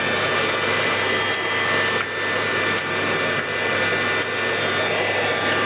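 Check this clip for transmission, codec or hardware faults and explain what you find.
One fault runs through the whole recording: gain pumping. The gain swings by around 5 dB, pulled down on each loud sound. The likely cause is input gain set far too high, with a fast limiter pulling it back down. On the waveform the peaks look flattened. All content stops at 4 kHz, the band limit of the G.711 call path.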